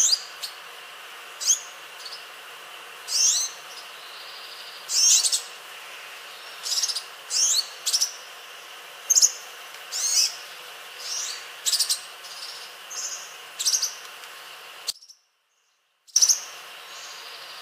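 At 14.9 s the sound abruptly collapses to a faint residue far below its normal level for 1.26 s, an audio dropout likely caused by signal loss upstream while the path stayed live.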